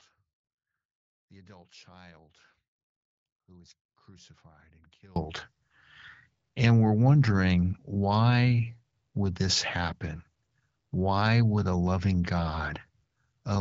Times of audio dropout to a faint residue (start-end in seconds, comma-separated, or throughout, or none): 0.00-5.16